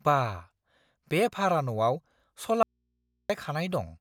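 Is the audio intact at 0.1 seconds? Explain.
Yes, at 0.1 seconds the speech is intact, with no dropout, click, distortion or other fault at that point.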